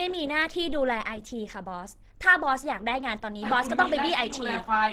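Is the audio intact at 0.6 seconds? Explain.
No. Opus compression affects the whole clip, including 0.6 s. The speech sounds plainly hoarse and grainy, likely from Opus coding in its hybrid speech mode at a low bitrate, which fits about 16 kbps. Bands are rebuilt from folded or noise-filled content, though the bandwidth still reaches 20.2 kHz.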